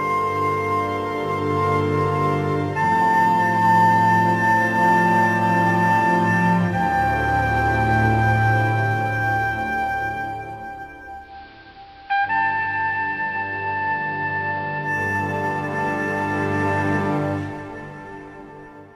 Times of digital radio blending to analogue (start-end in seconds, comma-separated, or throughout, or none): 11.18-15.00